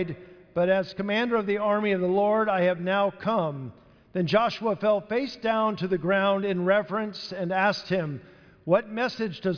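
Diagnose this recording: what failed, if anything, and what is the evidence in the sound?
Nothing in the recording points to a failure at any stage, so there's really nothing here to diagnose.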